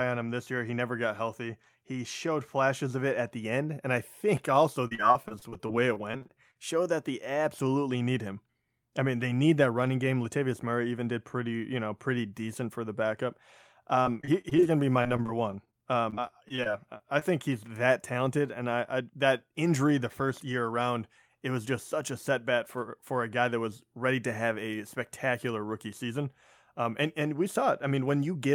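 Repeated packet loss (robotic sound) hits at 4.87–6.57 s after "and I think also", 14.03–14.64 s before "going to be my", 15.02–15.75 s after it, and 16.10–17.23 s. Gaps of up to 40 ms are patched by stretching the last sound, giving choppy speech. Spectrograms show smeared, repeated frames broken by thin vertical dropouts.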